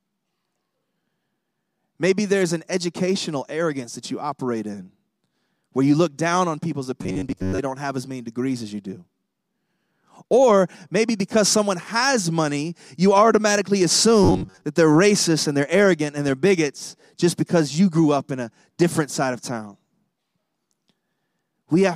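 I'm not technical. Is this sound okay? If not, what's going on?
No. The speech turns robotic twice, from 7.03 to 7.58 s and from 14.23 to 14.65 s. This is robotic sound from repeated short buffers: new audio likely arrived too slowly, so a tiny slice of about 11 ms was played over and over. That imposes a steady metallic buzz near 94 Hz. About half of the first stretch and most of the second was filled with repeats, so real audio there is missing.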